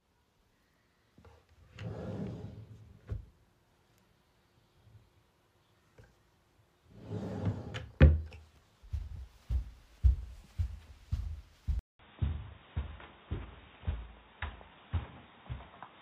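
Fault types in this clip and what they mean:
Input switched to a poorer device: at 11.79 s the sound drops out for about 200 ms, and from there to the end it carries nothing above 3.8 kHz, so the everyday sounds turn dull and boxy. A new noise floor appears, roughly 40 dB below the signal, while loudness stays essentially the same. The abrupt band-limiting with a gap points to a likely change of capture device mid-recording.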